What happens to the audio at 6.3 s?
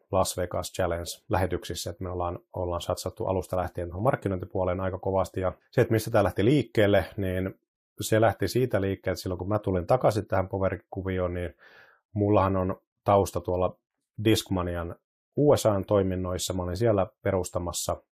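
Nothing goes wrong at 6.3 s: the speech carries on intact through that moment, with no dropout, click, distortion or other fault audible there.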